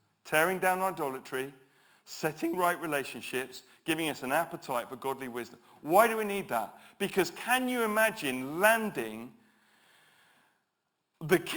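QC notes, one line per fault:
throughout, imaging from sample-and-hold upsampling: held samples, pointing to a 12 kHz source rate, mirror speech into 6–12 kHz at about -16 dB, giving metallic fizz; spectrogram shows upside-down harmonics.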